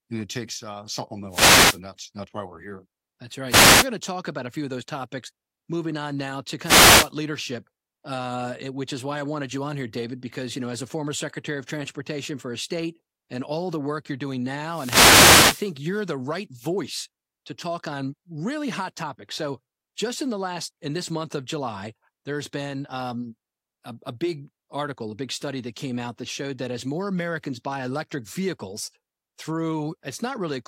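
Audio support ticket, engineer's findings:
Wireless microphone noise hits: analogue FM radio link fading as reflections cancel, so receiver noise rises through the speech as bursts of static. At 1.29–1.80 s (before "that's that's why we're"), 3.48–3.88 s (before "to talk about a"), 6.62–7.11 s, and 14.66–15.74 s (after "the work you're doing").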